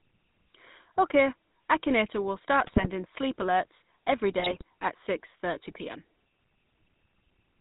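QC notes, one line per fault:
Throughout: GSM full-rate codec. The speech has been squeezed through the original GSM full-rate coder at 13 kbps, which rebuilds each stretch from a vocal-tract filter excited by a sparse, evenly spaced pulse train, with only one excitation sample in three kept. Nothing above 4 kHz survives, so the speech is dull at the top, and the coarse excitation gives it a plainly audible buzzy, gravelly grain.
2.66–2.88 s and 4.38–4.62 s: GSM bit errors. In both spans corrupted bits, at roughly 2% error rate, reached the decoder, spoiling the filter, pitch and gain parameters in successive frames. Each affected frame is rebuilt with a warped spectrum or a runaway level, so for about a fifth to a quarter of a second the speech breaks up into squawks, pops and gargling before the decoder recovers.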